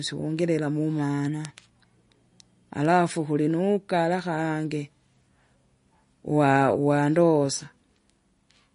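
Bit error spikes at 1.45, 2.85 and 4.19 s each register as a single sharp tick in this speech recording. Each one is a lone corrupted sample where a flipped bit throws the value off by a power of two before the next sample snaps back, so the click covers the whole spectrum and bears no relation to the speech around it. MP3 compression is the likely cause of the damage that runs through the entire clip. Nothing survives above 10.6 kHz, and the coding artefacts are plainly audible, giving the speech a watery, swirling quality with metallic chirping on s sounds and softened consonant onsets. That fits an encoder starved at roughly 40 kbps, cutting the treble at a fixed point and dropping weak frequency lines that flicker in and out from frame to frame.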